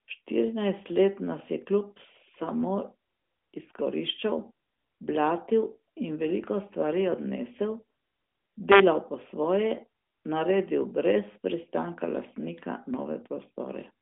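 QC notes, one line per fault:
No faults found; the speech sits on a narrowband AMR mobile path at 12.2 kbps, with the band closing above about 3.6 kHz as expected for that line.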